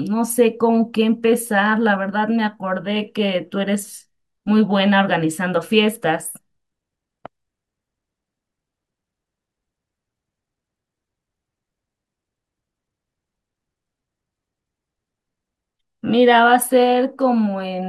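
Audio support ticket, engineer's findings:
No faults found in the speech audio; nothing to action.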